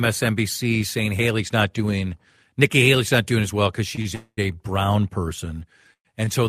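At 3.95–3.99 s and again at 4.01–4.07 s there are two short stalls from a late packet. Each time the jitter buffer ran dry and the receiver held the last sound rather than skipping ahead, stretching it by about 20 ms and then 37 ms. It resumes at the same point, so nothing is lost, but the sound briefly drags with a faint buzzy hold. The same stall recurs at 6.25–6.29 s, an 18 ms stretch.

From 4.15 to 4.39 s there is a call audio freeze. The sound turns into a sustained buzz that decays, with about 60 ms of silence inside the 223 ms hold, before the audio picks up where it stopped. A second freeze at 5.93–6.07 s lasts 115 ms, about 90 ms of it silent. The likely cause is packets delayed in transit, emptying the jitter buffer. Each freeze inserts a gap that pushes the rest of the audio later, with nothing missing.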